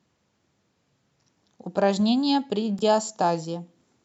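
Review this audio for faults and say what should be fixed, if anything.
At 2.79 to 2.83 s the speech catches on a brief stutter, a 23 ms slice repeated before the sound resumes slightly further on. This is a Bluetooth stutter: an audio packet arrived late or not at all, so the receiver replayed its last buffer to fill the gap. To prevent it, keep the Bluetooth link short and free of interference, or record over a wired connection.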